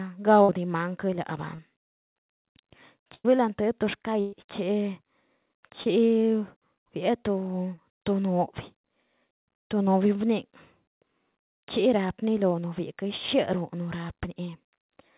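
Speech that three times turns into a held, fading buzz or hiss and then jumps ahead, at 0.42 to 0.49 s, 3.14 to 3.25 s and 4.20 to 4.33 s. These are bursts of packet loss: about 70, 100 and 120 ms of audio never arrived in time, so the receiver stretched the last sound while turning it down, and the sound in between is gone. Three briefer smears or wobbles at 1.55 to 1.59 s, 5.83 to 5.87 s and 7.77 to 7.79 s are short concealed packet loss. Roughly 30, 20 and 10 ms went missing, and the decoder patched each hole by extending the preceding sound before blending back into the real signal. The whole clip has nothing above 4 kHz, which fits a narrowband call path such as G.711 mu-law at 64 kbps.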